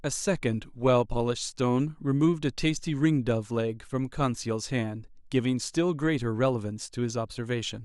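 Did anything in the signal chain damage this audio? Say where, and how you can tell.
No, nothing along the signal chain has audibly damaged this speech recording, and the signal reaches the listener intact at every stage.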